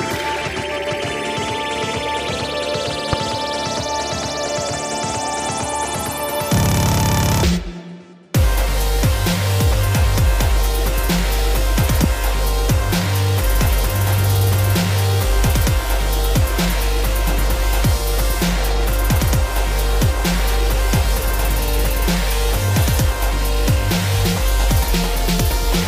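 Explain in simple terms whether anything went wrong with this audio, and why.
Two loud pops, at 3.13–3.15 s and 12.04–12.06 s (the second stronger), likely electrical jolts; unlike a dropout, the sound carries on underneath them.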